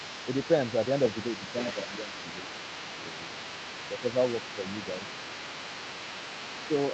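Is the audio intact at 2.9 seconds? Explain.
No. At 2.9 s, as throughout the clip from 0.0 to 6.93 s, the other side's voice is leaking through: a second voice sits about 15 dB below the main speech. It is likely loudspeaker playback that the echo canceller failed to fully remove from the microphone.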